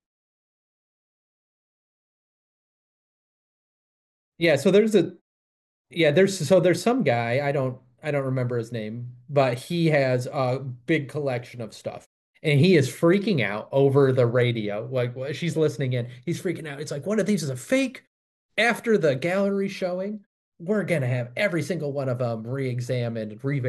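No technical faults are audible.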